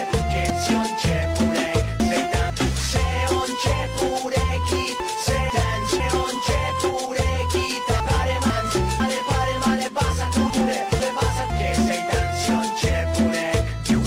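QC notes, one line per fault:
0.5–2.5 s, chunks out of order: one 500 ms chunk plays three chunks late, so the sound jumps and then jumps back. There are three hard joins. These appear as vertical broadband lines on the spectrogram, with contours breaking and resuming out of sequence.
5.0–6.0 s, 8.0–9.0 s, 10.5–11.5 s, chunks out of order: in each, a 500 ms chunk arrives one chunk late, so two neighbours swap places. Each gives a brief jumbled stutter, shown as waveform steps at the boundaries.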